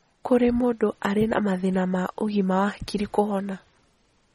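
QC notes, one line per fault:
throughout: MP3 compression. Nothing is heard above 15.1 kHz, and the speech has a plainly audible watery, smeared texture. This likely comes from an MP3 encode, and the damage fits a bitrate near 32 kbps. Starved of bits, the encoder cut the treble and dropped weak detail frame by frame.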